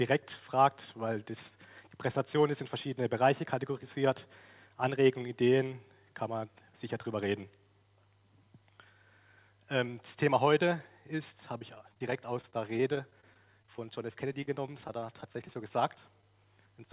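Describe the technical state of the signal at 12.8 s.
At 12.8 s the audio is inside a stretch of repeated packet loss (robotic sound), from 11.58 to 14.59 s. Packets kept going missing. Each of 29 gaps, none over 29 ms, is patched by extending the preceding sound. The result is choppy, with pieces dropped.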